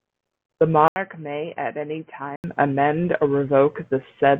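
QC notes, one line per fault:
0.88–2.44 s, input switched to a poorer device: an 80 ms silence, then boxy, quieter speech with nothing above 3.1 kHz and faint new background noise, starting at "amend or"; likely another microphone.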